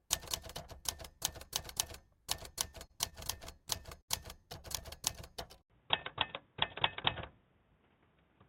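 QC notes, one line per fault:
2.71–4.10 s, repeated stalls (stutter): The sound hitches ten times across this span. The gaps are short, the longest about 70 ms, and together they fill about 189 ms, roughly 14% of the span. Nothing is lost. Data is arriving late, so the playback buffer keeps running dry. Each time, the receiver stretches the last sound to cover the wait and then carries on. The result drags and stutters instead of skipping.
5.62 s to the end, input switched to a poorer device: An 80 ms silence comes first. Then the tone changes abruptly and stays changed. The band narrows, so the sound turns dull and boxy. The level shifts by a few decibels, and a faint new noise floor appears well below the signal. This is likely a switch to a different, narrower-band input device, with its own tone, gain and background noise.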